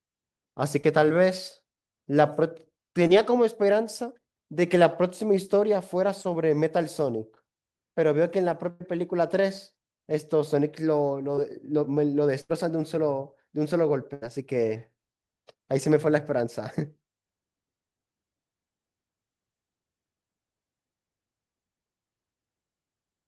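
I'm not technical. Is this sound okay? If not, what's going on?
No. This is speech from a call, and it has two kinds of network fault.

Short concealed packet loss: about 20 ms of audio failed to arrive at 0.81, 3.07, 6.23 and 11.35 seconds. The receiver papered over each tiny gap by stretching the sound just before it, so you hear a quick smear or wobble.

Burst of packet loss: longer chunks were lost at 8.71 s (about 100 ms), 12.41 s and 14.13 s (about 80 ms each). The receiver kept the last sound going as a fading buzz or hiss, then jumped ahead, so a little speech is missing.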